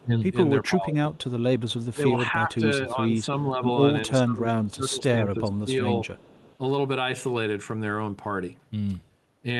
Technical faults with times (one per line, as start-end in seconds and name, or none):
0.00-0.12 speech suppressed in double talk
0.70-1.33 speech suppressed in double talk
1.14-1.23 echo leak
1.94-3.63 speech suppressed in double talk
4.06-5.83 speech suppressed in double talk
4.64-4.72 echo leak
6.17-6.57 echo leak